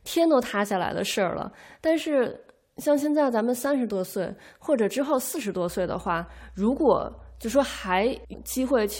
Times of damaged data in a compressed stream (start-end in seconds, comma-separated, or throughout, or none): 8.32